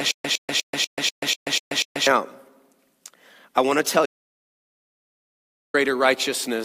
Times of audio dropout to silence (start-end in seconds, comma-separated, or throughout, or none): 4.06-5.74